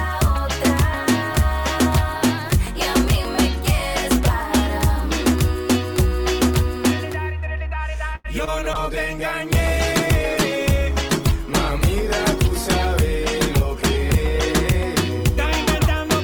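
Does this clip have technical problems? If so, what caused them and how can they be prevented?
Yes. At 8.15 to 8.26 s there is a short stall from a late packet. The jitter buffer ran dry, so the receiver held the last sound for 90 ms and then resumed without losing anything. A deeper or adaptive jitter buffer would absorb this kind of late arrival.

Short concealed packet loss follows at 8.38 to 8.41 s and 8.45 to 8.49 s. Each time, 20 ms never arrived, and the decoder filled the gap by extending the preceding sound, leaving a brief smear or wobble. Forward error correction or redundant packets would let the receiver rebuild these gaps instead of guessing.

A call bitrate drop runs from 8.75 to 14.57 s. The bandwidth estimate fell and the encoder went from 128 to 16 kbps, so the audio turns coarse and dull, with highs trimmed. Better congestion control and a higher minimum bitrate would prevent this.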